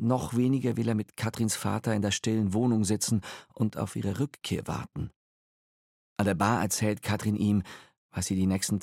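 A block of digital silence at 0.72 s lasts under a millisecond, which fits a block of about 32 samples dropped to zero. The sound cuts straight to silence and back with no fade, so the two abrupt edges merge into a single sharp tick.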